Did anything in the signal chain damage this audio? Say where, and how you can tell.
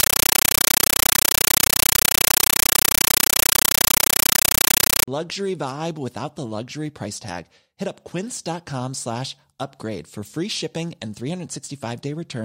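Yes, a compressed stream played as audio at the playback link: from 0 to 5.08 s, just before "vibe without the luxury", loud chattering static replaces the speech. It's 9.3 ms noise bursts 31.25 times a second, which points to an undecoded AC-3 stream, likely around 448 kbps.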